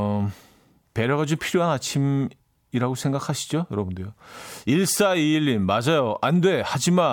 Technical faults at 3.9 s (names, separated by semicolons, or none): none